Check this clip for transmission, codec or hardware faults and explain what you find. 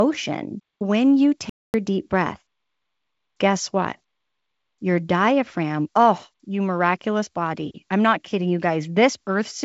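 The clip has one fault, a playback stall. From 1.50 s to 1.74 s the speech drops into silence for 245 ms, then resumes. The player likely ran out of buffered data or had its thread blocked, so output halted until it recovered. The G.722 wideband coding is working as intended, with speech clear up to about 7 kHz.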